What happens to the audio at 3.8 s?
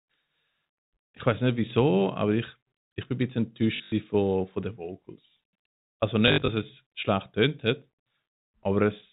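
Between 3.76 and 3.92 s, just after "ich bin ein bisschen", packet loss with last packet repeated drops about 120 ms of audio, with the receiver replaying the previous packet to fill each gap. The longest run is 80 ms. The repeats buzz near 50 Hz, which fits 20 ms packets, giving a brief robotic stutter before "von von den".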